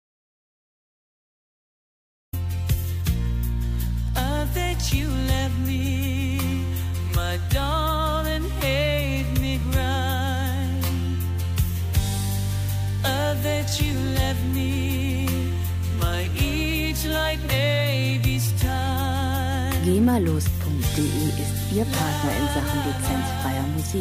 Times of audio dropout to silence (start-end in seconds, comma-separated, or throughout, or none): 0.00-2.33